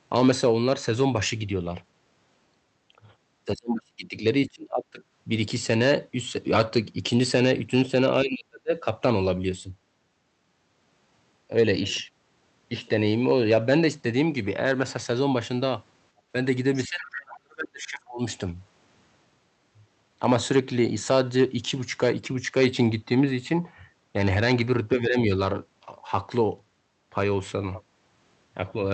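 Throughout the speech, loud peaks break into a brittle crackle. This is hard clipping: the signal was driven about 6 dB beyond what a stage in the chain could pass, so the tops of the loudest waveforms are sliced flat. Only a small fraction of the audio crosses that ceiling, so the effect comes in sharp bursts on peaks rather than as a constant fuzz. The flattened peaks still scatter harsh upper harmonics each time.

From 3.54 to 4.16 s the voice sinks almost to nothing, by roughly 35 dB. It dips again from 4.48 to 5.01 s, somewhat less deeply, then drops hard from 8.24 to 8.73 s. The longest stretch runs from 16.84 to 18.21 s, about a second and a half of gutted speech. A shallow dip of around 10 dB follows from 24.96 to 25.3 s. This pattern is speech suppressed in double talk. The likely cause is that both ends were talking at once and the echo canceller, unable to tell its own talker from loudspeaker echo, turned everything down.

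Between 16.17 and 16.27 s the room tone briefly ducks by about 7 dB and then recovers. This is background gated by the echo canceller. While the loudspeaker was active, the canceller clamped the microphone, and the ambient bed sagged for roughly 70 ms before the gate released.

At 16.74 to 16.81 s a faint scrap of a second voice slips in, sitting around 20 dB below the main speech. This is the other side's voice leaking through. Its likely source is far-end playback reaching the microphone that the echo canceller failed to fully remove. It appears just before the long suppression begins.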